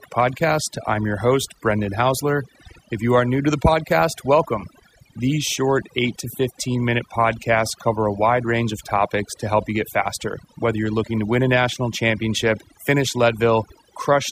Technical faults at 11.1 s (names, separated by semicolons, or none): overdone noise removal